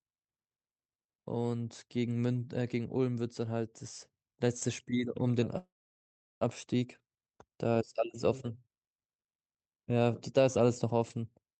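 At 5.57 s a call audio freeze halts the speech until 6.43 s. A short fading tail gives way to silence. Speech resumes intact, likely after a jitter-buffer underrun.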